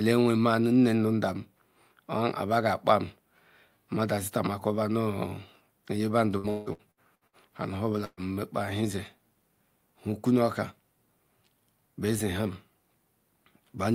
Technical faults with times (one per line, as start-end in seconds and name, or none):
6.37-7.36 repeated packet loss (robotic sound)
8.05-8.20 burst of packet loss